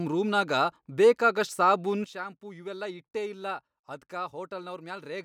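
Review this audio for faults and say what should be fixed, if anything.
At 2.04 s, right after "ರೂಮ್ನಾಗ ಬೇಕಾಗಷ್ಟ್ ಸಾಬೂನ್", there is a sudden gain jump: the speech and the background noise drop together by about 12 dB and stay at the lower level through the end of the clip. Because the step happens between one sample and the next with no ramp, the cause is likely a gain setting or bit shift applied instantly in the digital path. The affected section should be restored to match the earlier level. To prevent this, apply any gain change through a short ramp or crossfade rather than as an immediate step.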